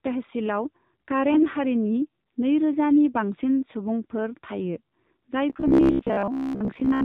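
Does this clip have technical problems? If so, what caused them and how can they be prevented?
Yes. The AMR narrowband mobile codec is audible throughout: nothing above 4 kHz survives, and the sound is buzzy and synthetic, which fits a low rate near 7.4 kbit/s. Using a wideband codec or a higher bitrate would prevent this.

AMR bit errors occur at 1.31–1.43 s, just before "हारिनि नैरोजानि बांसिन". Flipped low-priority bits misplace the excitation pulses across about six 20 ms frames, so the sound turns scratchy and gargly. A stronger radio link or better error protection would prevent this.

Robotic sound from repeated short buffers runs from 5.50 to 7.04 s. It is a rigid, metallic 67 Hz buzz, likely caused by roughly 15 ms buffers being replayed while most of the real audio is skipped. Steady audio delivery and a larger jitter buffer would prevent this.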